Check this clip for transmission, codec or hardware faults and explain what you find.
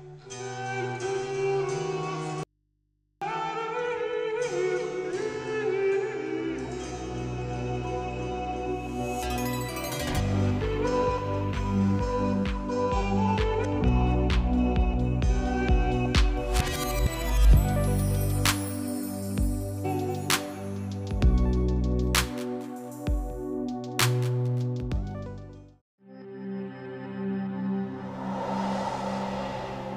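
One fault: an audio dropout to a faint residue from 2.43 to 3.22 s, lasting about 0.78 s. The wanted signal breaks off abruptly and returns just as suddenly, while the path behind it stays live. The gap holds a low mains hum, roughly 45 dB below the signal, which is likely an open or momentarily disconnected input picking up hum until the connection is restored.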